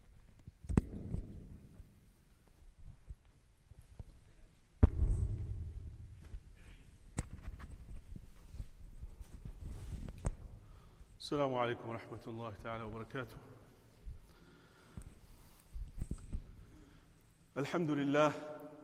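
Nothing in the audio stands out as a technical problem, so there's nothing here to flag.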